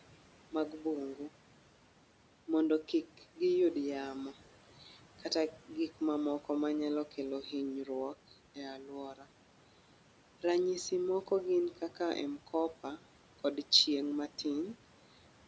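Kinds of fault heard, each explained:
Noise suppressor artifacts: the suppressor tracks the steady room noise and attenuates, frame by frame, every band it judges to be noise, here by about 12 dB. The background therefore drops away in the pauses and comes back up underneath the speech throughout the clip.
Speech cut by the noise suppressor: from 9.14 to 9.25 s the suppressor mistakes a short piece of speech for noise and lowers it together with the background, by about 11 dB at the deepest point. Roughly a tenth of a second sounds swallowed and faint.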